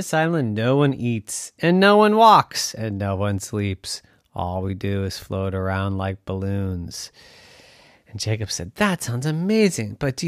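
No technical faults can be heard anywhere in the speech recording.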